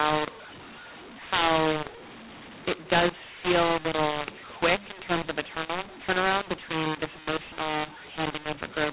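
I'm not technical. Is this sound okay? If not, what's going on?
No. The speech sounds harsh and gritty throughout, with hiss filling the pauses. This is mu-law and A-law mixed up: phone audio stored in A-law was read back as mu-law, scrambling the loudness of every sample.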